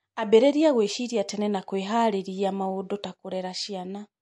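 MP3 compression artefacts run throughout the speech. Nothing survives above 11.3 kHz, and the sound is plainly watery and swirly. The encoder likely ran short of bits, fitting a rate near 48 kbps, so it cut the treble and let weak frequency lines flicker between frames.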